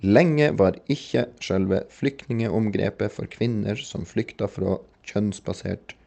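Nothing in this speech recording stood out as a technical problem on listening, its high end rolling off near 8 kHz in the way an Opus call path at that bandwidth setting would leave it.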